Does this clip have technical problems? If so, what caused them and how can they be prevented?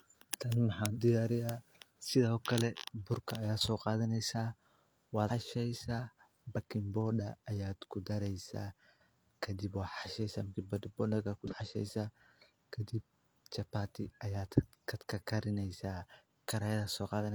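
Yes. Damaged data in a compressed stream causes brief glitches at 0.93–0.98, 5.25–5.30, 8.97–9.01 and 11.47–11.53 s. Corrupt bytes throw the decoder off until it resyncs on a later frame header. Checksummed storage and error-protected transmission prevent this.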